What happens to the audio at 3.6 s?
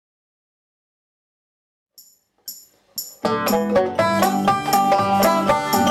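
At 3.6 s the audio is in a stretch of hard clipping that runs from 3.25 s to 5.91 s. The signal is driven about 9 dB past what a stage can pass. Its peaks are sliced flat. The flat tops add high harmonics, heard as crackle or fuzz on loud parts.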